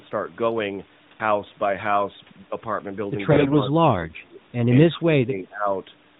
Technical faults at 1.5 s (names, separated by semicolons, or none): AMR bit errors